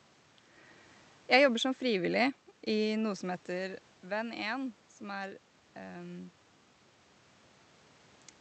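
Listening through this speech recording, nothing stood out as a technical problem.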